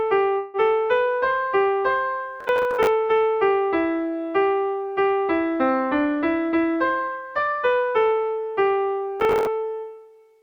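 From 0.37 to 0.57 s the sound stretches into a fading buzz or hiss for about 165 ms, likely a call audio freeze. Delayed packets emptied the jitter buffer. Nothing is lost.

Processor overload crackle tears through 2.41 to 2.87 s, and again from 9.20 to 9.47 s. Missed deadlines repeat scraps of old audio with hard edges. The gritty texture fits buffers of roughly 10 ms.

A jitter buffer speed-up runs from 6.49 to 7.54 s. Short pitch periods are cut to drain surplus delay, roughly 150 ms in total. The sound plays at 113% speed, hurried but unchanged in pitch.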